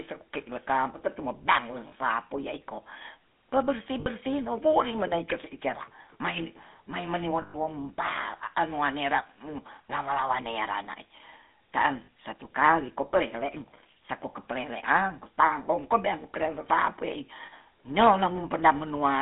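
Speech with a buzzy, gravelly roughness throughout, confined to a narrow band of roughly 200 Hz to 3.6 kHz. This is the sound of the GSM full-rate codec, whose regular-pulse excitation model and 13 kbps budget strip away fine detail and leave a plainly audible rasp. Lost GSM frames also cause brief metallic, ringing holds at 1.88 s (40 ms), 4.0 s (60 ms), 7.42 s (120 ms, the longest), 12.04 s (40 ms) and 17.46 s (60 ms). In each, the decoder repeats the last good frame's settings in place of the missing data.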